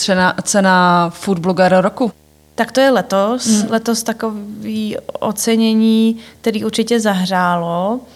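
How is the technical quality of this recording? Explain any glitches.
The recording is marred by one steady fault. A video or display buzz runs through the whole clip. A screen or its cable is leaking into the audio path. The result is a 75 Hz buzz, locked to the picture's field rate, with hash above it. It sits well below the speech.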